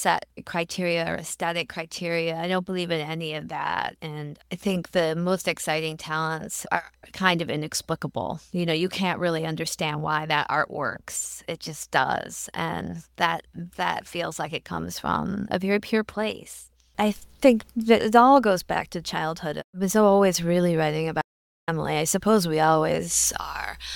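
At 21.22 s the sound cuts off abruptly. This is an audio dropout to silence. The gap lasts until 21.68 s, about 0.46 s. Nothing remains inside it, not even room tone. The signal stops in mid-flow and resumes just as suddenly. The input was likely lost briefly while the recorder kept writing silence. Whatever occurred during that half second is missing from the audio.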